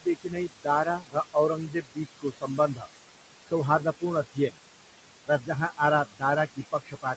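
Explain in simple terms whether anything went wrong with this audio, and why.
Something did go wrong, in two ways. Both come from the noise suppressor in the call.

Noise suppressor artifacts run through the whole clip. The suppressor pushes the room's background noise far down between words and lets it back up underneath them.

There is also speech cut by the noise suppressor. The suppressor mistook parts of the talking for noise and turned them down. This happens from 0.0 to 2.88 s, for about a second and a half in total, again between 3.47 and 4.59 s, for under half a second, and from 5.26 s to the end. Quiet sounds and word endings there come out swallowed or faint.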